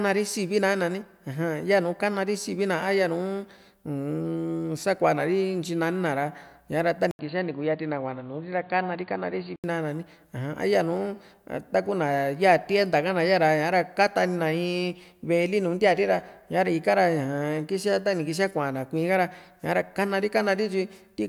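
Input switched to a poorer device, from 7.11 to 9.64 s in this speech clip: after an 80 ms gap, the sound turns dull with nothing above 4.6 kHz and a faint new noise floor at much the same level, likely a narrower-band microphone taking over briefly.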